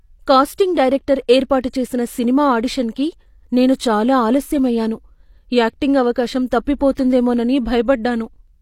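Pre-echo at 6.95 to 6.97 s, just after "యాక్టింగ్ అవకాశం": a brief hiss of about 22 ms runs ahead of a sharp speech onset. The codec spread quantisation noise across its whole block, so the quiet gap before the attack carries noise meant for the louder sound, softening that onset.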